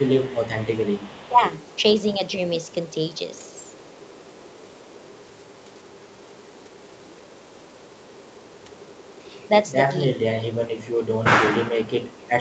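From 0.0 to 9.71 s there's an echo leak running under the speech: a faint copy of the talker trailing about 0.4 s behind, sitting roughly 25 dB down. It's most likely a far end on speakerphone whose echo canceller didn't fully scrub what its mic picked up, so the leftover got sent straight back. It shows up again as short scraps at 10.82 to 10.9 s and 12.02 to 12.13 s, even quieter, around 30 dB below the speech, with the same 0.4 s lag.

Between 1.24 and 1.43 s there's a quick dip of about 20 dB in the talker's level, lasting roughly 200 ms. That's speech suppressed in double talk: the canceller likely couldn't tell the talker apart from the loudspeaker echo while both were active, so it pulled everything down. The same thing comes back in a bigger way from 10.19 s to the end. The speech gets clamped down by as much as about 25 dB and sounds ducked, with the echo scraps poking through.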